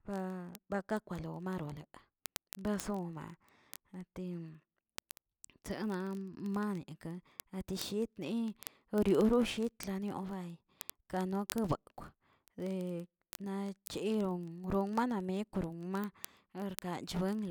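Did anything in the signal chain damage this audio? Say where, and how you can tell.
Yes. Word clock ticks run through the speech from 0.12 s to 17.49 s, a steady train of sharp, uneven clicks roughly every 20 ms, several hundred in all. The receiving digital interface was unlocked from the sender's clock, off by roughly a tenth of a percent, slipping one sample at each crossing.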